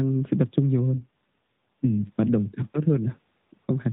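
From 0.97 s to 1.97 s the speech becomes rougher and more synthetic, with a buzzy, artificial edge. This is an AMR rate drop. The network has pushed the AMR-NB codec down to a lower mode and put the freed bits into error protection. The degradation fits a fall from 12.2 to 5.9 kbps. The 4 kHz narrowband ceiling stays the same and there is no gap. The sound returns to the lightly coded 12.2 kbps quality after 1.97 s.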